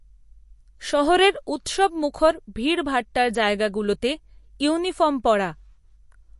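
From start to end, the speech carries MP3 compression damage. Nothing is present above 11.3 kHz. The treble stops at that fixed point. The damage is plainly audible. Weak frequency lines drop in and out between frames. That gives a watery, swirling texture. S sounds turn metallic and chirpy. Sharp onsets smear. The likely cause is an encoder short of bits. The sound fits a low bitrate of around 48 kbps.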